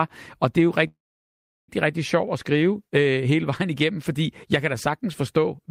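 At 0.87 s, after "og det er jo", a call audio freeze holds for 0.83 s: the last sound trails off as a fading buzz or hiss, then about 0.72 s of silence. "rigtig sjovt at" resumes at 1.70 s with nothing lost, likely from delayed packets draining the jitter buffer.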